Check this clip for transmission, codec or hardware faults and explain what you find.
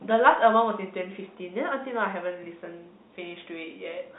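No transmission, codec or hardware faults are audible here.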